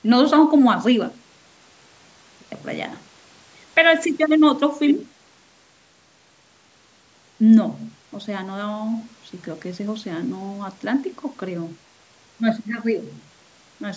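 No technical faults occur anywhere in the speech, which comes through the call's microphone processing with nothing above 8 kHz.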